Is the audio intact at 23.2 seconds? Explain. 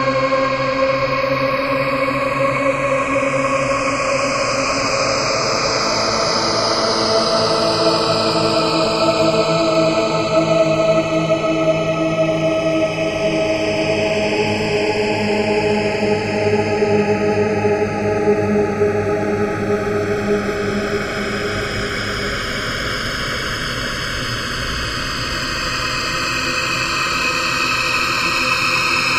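No. At 23.2 seconds you're in the middle of the channels drifting apart, which runs through the whole clip. The left and right sides seem to come from devices on separate clocks, off by around 20 ppm, so the gap between them slowly grows to about 0.7 ms by the end. Fold that to mono and the comb notches creep through the spectrum, giving these sounds a slow, seasick flanging.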